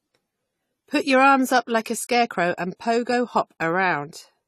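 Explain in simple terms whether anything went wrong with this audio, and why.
Something did go wrong, from start to finish. The speech sounds dull and a little smeared, as if heard through a thin cloth, and the crisp top end is missing, with nothing above about 14 kHz. This is most likely AAC compression. To make the file small, the encoder threw away sound it judged you wouldn't miss, cutting off the highest frequencies and roughening the detail that remained. At this level of squeezing, the damage is plainly audible.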